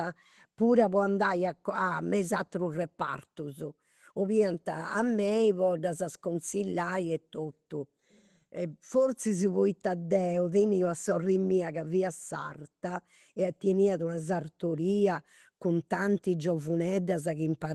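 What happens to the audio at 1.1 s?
Nothing goes wrong at 1.1 s: the speech carries on intact through the call path, with only the narrowed, coded quality that an Opus link at around 20 kbps gives throughout.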